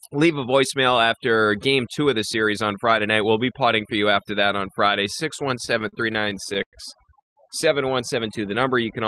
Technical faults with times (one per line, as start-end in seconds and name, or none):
0.00-9.07 overdone noise removal
5.65-6.75 repeated stalls (stutter)
7.21-7.38 call audio freeze